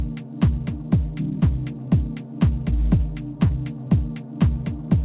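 Audio carried over a call path band-limited to 4 kHz, which fits G.711 A-law at 64 kbps. Short concealed packet loss occurs at 1.40 to 1.44 s and 3.48 to 3.51 s: about 20 ms of audio never arrived and was filled by extrapolating the preceding sound, heard as a brief smear.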